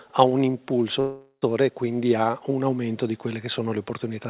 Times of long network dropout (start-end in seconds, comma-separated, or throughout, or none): 1.00-1.44